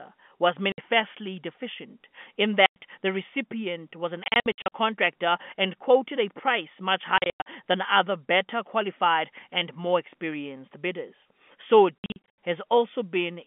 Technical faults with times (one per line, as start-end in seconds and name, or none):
0.72-0.78 packet loss filled with silence
2.66-2.76 packet loss filled with silence
4.24-4.71 packet loss filled with silence
7.18-7.46 packet loss filled with silence
11.99-12.36 packet loss filled with silence